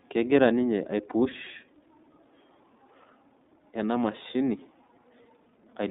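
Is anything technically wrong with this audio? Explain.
Yes. Throughout the clip the speech has been through the iLBC codec, a narrowband VoIP coder. The band runs only from about 200 Hz to 3.7 kHz, so the upper range is missing and the sound is thin. Each frame's excitation is coded on its own, with no carry-over from the previous frame, and the damage is plainly audible: a rough, slightly synthetic texture, with the codec running 30 ms frames at the 13.33 kbps mode.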